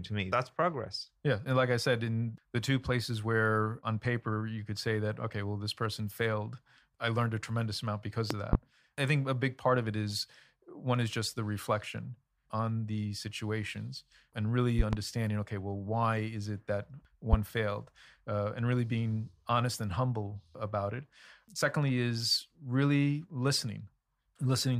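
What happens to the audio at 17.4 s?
A single sharp loud pop cuts across the speech from 17.33 to 17.37 s, just after "why is it that", standing out roughly 20 dB above the surrounding level while the talking carries on underneath it. The likely cause is a sudden electrical step or pulse, from a plug, switch, static discharge or driver glitch, entering the signal chain, where the following circuitry shapes it into this brief, forceful thump.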